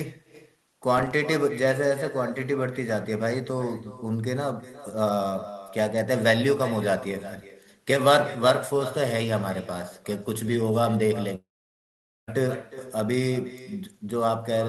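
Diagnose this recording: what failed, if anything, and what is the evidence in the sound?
A faint, thinner copy of the speech trails everything by roughly 0.4 s, about 15 dB down: echo with no canceller, where call processing leaves far-end loudspeaker pickup unremoved.

From 0.98 to 1.12 s a gritty crackle tears through the speech, as processor overload crackle in the driver or buffer stage drops about five short buffers, near 5 ms each, to silence.

Between 11.35 and 12.29 s the sound smears into a fading tail, then about 0.82 s of silence before speech resumes, likely a long network dropout with concealment.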